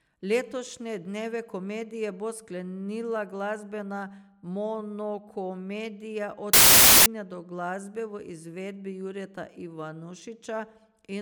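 From 6.53 to 7.06 s the reader assembles samples from the wrong bytes, misaligning or swapping their order so the rapidly changing low bits land in the most significant position. The speech is replaced by loud, harsh broadband noise for that half second.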